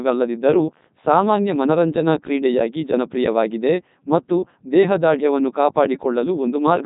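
Throughout, Codec 2 vocoder damage: speech, rebuilt from sine waves, buzzes robotically rather than smearing like waveform codecs, and nothing exceeds 3.8 kHz.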